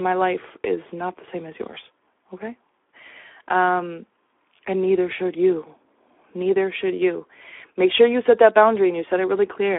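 Throughout, the speech carries plainly audible Speex codec damage. A starved CELP excitation, consistent with about 11 kbps, leaves a hoarse, noisy grain in a 300 Hz to 3.5 kHz band, with nothing above 3.8 kHz.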